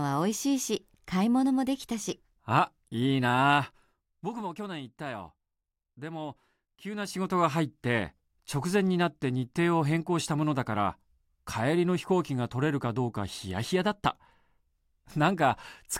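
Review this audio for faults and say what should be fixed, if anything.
No faults; nothing needs fixing.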